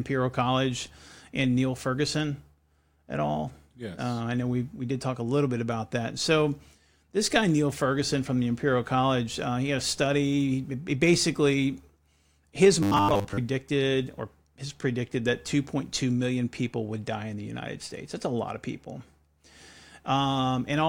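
From 12.83 to 13.38 s the speech turns into robotic sound from repeated short buffers: a rigid, metallic buzz fixed at 100 Hz, likely from a roughly 10 ms buffer replayed through most of that stretch. Unlike plain dropouts, the sound never goes silent.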